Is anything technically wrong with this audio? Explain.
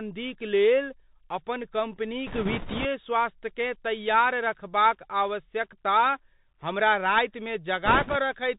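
Yes. Throughout, the speech carries Bluetooth CVSD headset codec damage, consistent with a 64 kbps CVSD link. Its one-bit adaptive-step coding cuts everything above 4 kHz, leaves a granular hiss, and roughens s sounds. A spectrogram shows an empty band above 4 kHz.

Bit errors on a Bluetooth voice link occur from 2.27 to 2.86 s, just before "स्वास्थ्यकेँ तैयार रखबाक आवश्यकता", and from 7.86 to 8.16 s, after "हमरा रातिमे". Flipped bits, at roughly 4 percent, add a rushing crackle without loud clicks. The spectrogram shows broadband noise fill, and the waveform shows no spikes.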